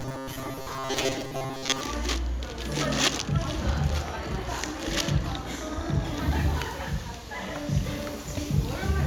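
From 0.01 s to 1.81 s the audio takes on a robotic sound from repeated short buffers. A rigid, metallic buzz at 133 Hz sits over the everyday sounds, which still come through only in rough outline. The likely cause is audio arriving too seldom, with playback refilling the gaps by looping the most recent fragment of about 7.5 ms. Around 70 percent of that stretch is repeated material rather than new audio.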